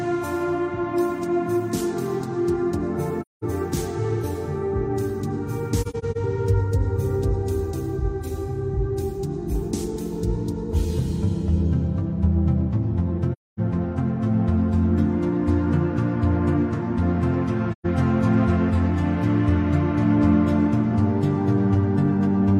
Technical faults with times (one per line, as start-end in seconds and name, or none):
3.21-3.43 AAC frame loss with muting
5.82-6.17 AAC frame loss with muting
13.33-13.59 AAC frame loss with muting
17.71-17.86 AAC frame loss with muting